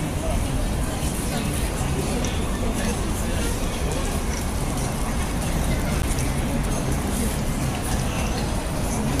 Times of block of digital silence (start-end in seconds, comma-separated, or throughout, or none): 6.02